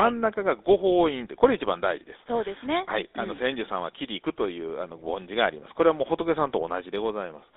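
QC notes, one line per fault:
throughout, GSM full-rate codec: the speech carries a buzzy, gravelly roughness, plainly audible, because the codec rebuilds the voice from a vocal-tract model driven by a sparse, regularly spaced pulse excitation, a coarseness that fits a 13 kbps stream. The line band runs from about 300 Hz to 3.7 kHz. On a spectrogram, nothing appears above 3.7 kHz or below 300 Hz, and harmonics look smeared and grainy rather than cleanly striated.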